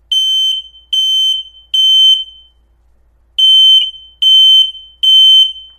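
It's a short recording of sounds, and there's a repeated frames glitch at about 3.80 to 3.83 s. A block of about 26 ms gets played twice in a row, which sounds like a tiny stutter. That length fits a single compressed frame being written or sent one extra time, and it stretches the audio by the same 26 ms.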